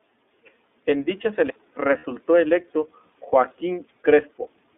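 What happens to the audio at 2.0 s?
From 1.98 to 2.05 s, lost iLBC frames: about 60 ms of sound, which fits two missing 30 ms frames, is replaced by the decoder repeating the last pitch cycle mixed with noise. It sounds like a held, slightly buzzy vowel. On a spectrogram the harmonics freeze into flat horizontal bands, and the waveform shows one cycle repeating until normal sound resumes almost immediately.

Underneath, the iLBC codec confines everything to roughly 250 Hz to 3.6 kHz, giving a rough, synthetic quality. A spectrogram shows empty bands above and below that range.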